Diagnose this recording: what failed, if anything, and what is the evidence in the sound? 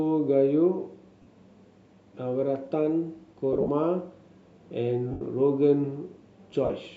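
Lost LE Audio frames at 1.22 to 1.27 s, 3.53 to 3.70 s, 5.11 to 5.21 s and 6.65 to 6.70 s. This is a wireless-link and codec fault. The LC3 decoder repeats the last spectrum with random signs and fades it as the dropout lengthens. The 3.53 s loss is broken up, with its longest run about 50 ms, and the gap lengths fit 7.5 ms frames.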